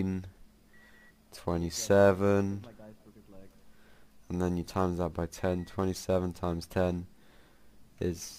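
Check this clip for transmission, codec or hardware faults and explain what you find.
Nothing in the clip stood out as a problem on listening.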